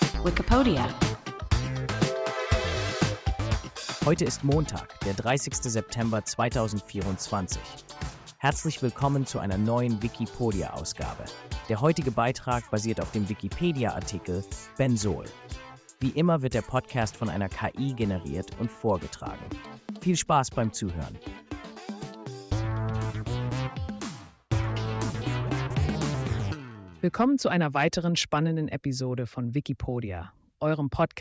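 Nothing goes wrong anywhere in this clip, so there's no technical fault to point to at any moment.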